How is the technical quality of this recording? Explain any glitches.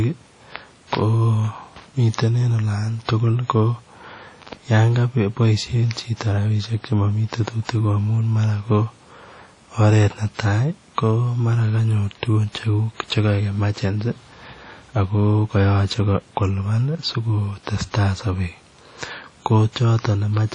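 The technical quality is poor, with plainly audible compression damage throughout. WMA compression, likely the cause, runs through the whole clip. The transform coder spreads quantisation noise over tens of milliseconds and drops weak components. Nothing remains above about 10.1 kHz, which fits a low bitrate around 32 kbps. The speech sounds ringing and washy, with a hiss that breathes along with it.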